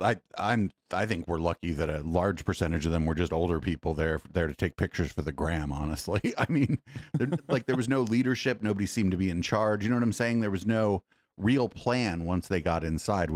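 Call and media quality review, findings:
Lost packet rebuilt from error correction, 9.39–9.45 s, right after "seemed to be in". Brief rough, noisier patch of about 40 ms, which fits two lost 20 ms packets. Opus decoder played the low-bitrate in-band FEC copy carried in the following packet. No gap or dropout, unlike a plain loss. Content continues, only coarser, rather than smearing or fading into the buzzy repetition of packet-loss concealment.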